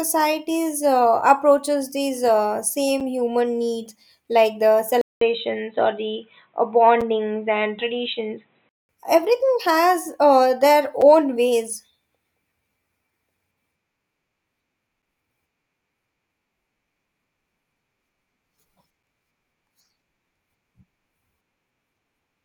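A tiny hard-edged hole cuts in at 3.00 s, between "uh approaches these uh" and "human needs like the", and recurs at 7.01 s and 11.01 s: a gap between chunks, about 6.5 ms of silence left where 4-second blocks were joined. At 5.01 s, right after "human needs like the", a 200 ms silence gives way to dull, muffled speech with nothing above 4 kHz until 8.89 s. The level stays about the same and a faint new noise floor sits far below the voice. The likely cause is that the input switched to a poorer device.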